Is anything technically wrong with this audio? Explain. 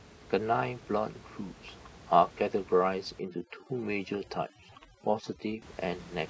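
Yes. From 3.2 s to 5.62 s there is overdone noise removal, cutting into a recording whose room noise otherwise sits about 21 dB below the speech. The reducer treats any frequency band close to its noise estimate as noise and drives it almost to zero, taking the quieter parts of the speech with it. The gaps fall to near silence dotted with twinkling specks. A spectrogram shows a dark, blotchy floor with isolated bright dots and ragged harmonic edges. The waveform's low-level floor collapses toward flatness between syllables.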